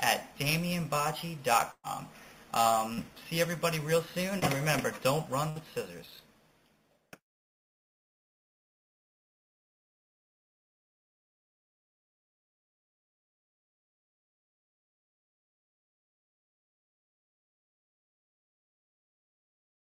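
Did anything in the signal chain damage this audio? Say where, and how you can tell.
Yes, the network stage damaged it, with two kinds of packet loss. There are bursts of packet loss at 1.71 to 1.86 s and 5.50 to 5.58 s, about 120 ms and 60 ms of audio missing. The receiver extended the last sound into a held buzz or fading hiss, and the first gap dies into about 60 ms of silence. On a spectrogram this shows as frozen, smeared harmonics tapering to blank. The waveform then resumes abruptly, with content skipped.

Short concealed packet loss occurs at 2.94 to 2.99 s and 4.39 to 4.44 s, with about 40 ms and 20 ms lost. Here the decoder bridged the holes by continuing the preceding sound and crossfading back into real audio, so each is heard as a brief smear or wobble. On a spectrogram the harmonics flatten or blur for a few frames. The waveform shows slightly repetitive cycles where detail is missing.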